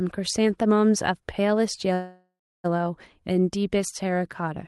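A speech clip in which, from 1.93 to 2.66 s, the sound stalls, trails off as a fading buzz or hiss and then sits silent for about 0.3 s before resuming exactly where it stopped. This call audio freeze is likely a delivery stall that emptied the jitter buffer: the receiver padded roughly 0.7 s and lost nothing. The band limit near 12 kHz fits a 32 kbps Opus path.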